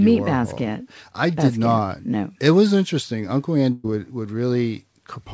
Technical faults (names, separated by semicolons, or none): burst of packet loss